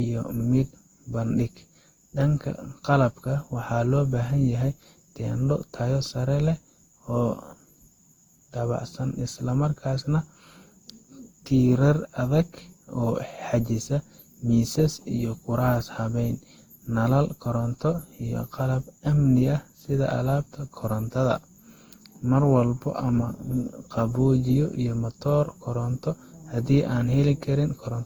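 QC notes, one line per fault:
Throughout: generation loss. The speech sounds swirly, hollow and smeared, with blurred consonant attacks, more damage than a single 48 kbit/s Opus-like encode would leave. The likely cause is roughly five encodes, each on a shifted frame grid, stacking noise below a 20.2 kHz ceiling.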